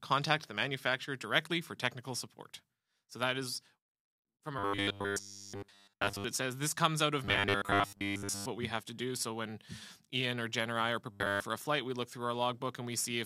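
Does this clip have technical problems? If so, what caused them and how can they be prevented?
Yes. There's robotic sound from repeated short buffers at 4.59–6.25 s, 7.25–8.47 s (where most of the stretch, not all, is affected) and 11.11–11.42 s. Each stretch turns into a hard metallic buzz at 100 Hz. That is likely playback starving for data and looping roughly a 10 ms chunk while the real audio is dropped. A larger jitter buffer or steadier delivery upstream should prevent it.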